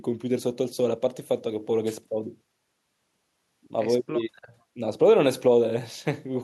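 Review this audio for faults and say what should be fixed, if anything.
No faults turn up in this audio, so nothing needs to be fixed.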